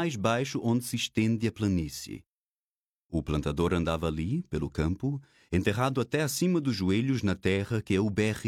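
Nothing here stands out as a technical fault; the audio just rolls along without any glitch worth pointing to.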